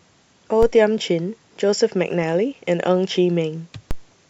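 At 0.63 s and again at 3.91 s, a DC step shifts the waveform's zero line by about -12 dBFS, heard as a low thump beneath the speech, then decays away through a 5 Hz high-pass.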